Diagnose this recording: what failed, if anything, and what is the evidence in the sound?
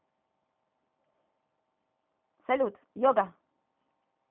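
Codec stage: throughout, the speech sounds rough and synthetic, with nothing above 3.8 kHz. This is a G.729 codec, likely at 8 kbit/s, not simple telephone band-limiting.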